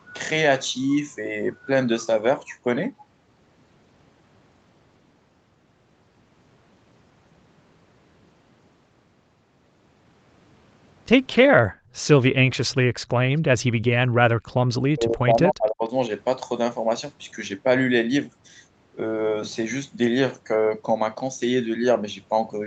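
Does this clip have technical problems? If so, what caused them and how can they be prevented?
Yes. From 11.65 to 11.96 s the background is gated by the echo canceller: while the far-end loudspeaker plays, the room sound drops by about 22 dB, then returns. Tuning the canceller to suppress less aggressively when only echo is present would prevent it.

From 14.83 to 15.91 s the speech dips hard, by around 40 dB, for most of that second. The likely cause is speech suppressed in double talk, where the canceller mistook the talker for echo while both sides spoke. A canceller with better double-talk detection, or headsets to cut the echo path, would prevent it.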